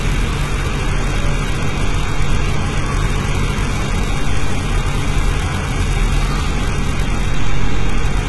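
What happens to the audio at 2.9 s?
At 2.9 s the treble sounds gritty and metallic, with its bright upper detail not lining up with the body of the sound below it. Nothing at all reaches above 11.8 kHz. This is not a separate event at that moment: it runs through the whole clip. It is likely HE-AAC compression, which codes only the lower band and synthesizes the treble by copying those bands upward under a coarse envelope. The heavy damage fits a bitrate of around 16 kbps.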